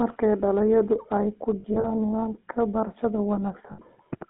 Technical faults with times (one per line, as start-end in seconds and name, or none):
0.00-4.29 GSM full-rate codec
1.60-1.88 lost GSM frames
3.72-3.80 lost GSM frames